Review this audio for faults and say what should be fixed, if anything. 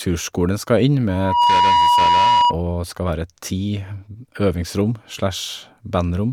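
From 1.08 to 2.57 s there's loudspeaker feedback squeal: the mic catches its own speaker, and a 965 Hz tone swells within about a third of a second to sit a few dB over the speech. Pull the mic back from the speaker or notch 965 Hz to stop it.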